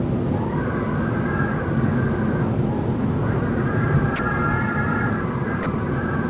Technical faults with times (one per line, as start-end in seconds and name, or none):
4.16-4.19 sound dropped by the voice detector
5.63-5.66 sound dropped by the voice detector